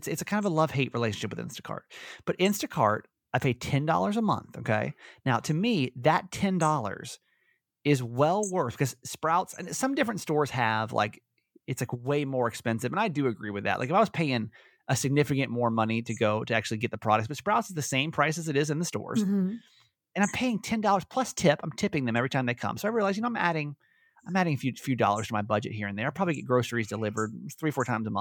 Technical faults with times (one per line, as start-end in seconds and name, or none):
none